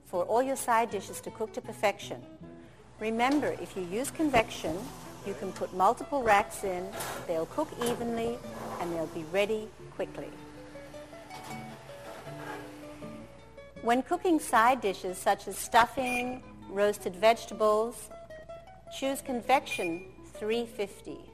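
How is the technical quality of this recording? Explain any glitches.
The recording has plainly audible coding damage throughout, plus five short bursts of reception errors.

Throughout, the sound is dull and grainy with a gurgling edge, likely from MP2 compression at a low rate consistent with about 80 kbps. Too few bits force upper sub-bands off and coarsely quantise the rest.

DAB burbling occurs at 4.34–4.90 s, 6.21–7.06 s, 8.01–8.98 s, 15.53–16.52 s and 17.92–18.79 s: short blips of noise over the sound. Residual bit errors, roughly one percent or less, corrupt MP2 frames, putting wrong samples into single sub-bands.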